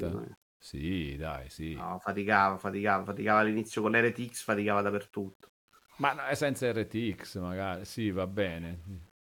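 Speech runs the full clip with a grainy, rough texture that rises and falls with the level of the sound. That points to low bit depth without dither, likely a reduction to about 9 bits by plain rounding, leaving error roughly 35 dB below the signal. Unlike steady hiss or dithered noise, this grit follows the signal, roughening quiet passages and sputtering or dropping to silence in the softest moments.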